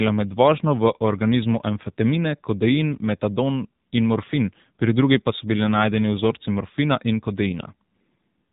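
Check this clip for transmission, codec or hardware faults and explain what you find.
The audio has gone through an AMR narrowband mobile codec, and its damage is plainly audible across the whole clip. The codec samples at 8 kHz and rebuilds speech from a vocal-tract model excited by sparse pulses in each 5 ms subframe of a 20 ms frame. Everything above 4 kHz is cut away, leaving the speech muffled and telephone-like, and the thin pulse excitation gives it a buzzy, synthetic edge, which fits a low mode around 7.4 kbps.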